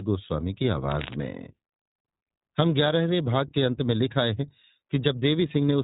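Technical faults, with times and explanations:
Throughout, iLBC codec: nothing above 3.8 kHz, and the speech turns rough and slightly synthetic. The 20 ms frames are coded independently, fitting the 15.2 kbps mode, unlike smooth band-limiting alone.
0.90 to 1.15 s, cable scratch noise: dense, uneven rustling bursts about 10 dB below the speech, likely a worn connector shifting. This is irregular scraping, not isolated clicks or steady hiss.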